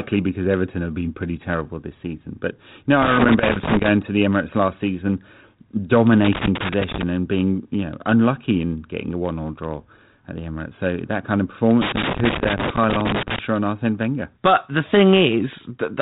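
Loose connector crackle at 3.02 to 3.89 s, 6.25 to 7.03 s and 11.81 to 13.39 s: a worn contact repeatedly breaks the speech signal, producing irregular bursts of scratchy crackle.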